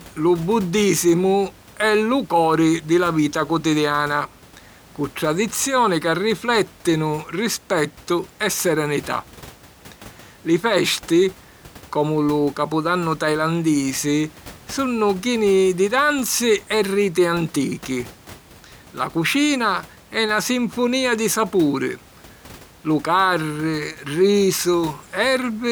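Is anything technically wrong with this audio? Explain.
No, nothing in this speech recording points to a technical fault. A low background of room noise sits about 25 dB below the speech, which is part of the recording space rather than a problem with the system.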